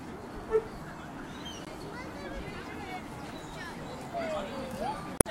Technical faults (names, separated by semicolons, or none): damaged data in a compressed stream